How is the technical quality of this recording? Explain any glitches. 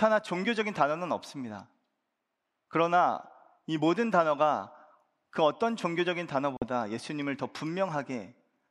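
The recording has one glitch, a Bluetooth dropout from 6.57 to 6.65 s. For about 84 ms the speech cuts to silence, then picks up again further along, as if it had kept running during the gap. The likely cause is audio packets that missed their delivery deadline on the wireless link to the headphones and were discarded, which fits a few packets lost in a row. On a waveform it appears as a flat line. On a spectrogram it is a narrow vertical band of silence across all frequencies.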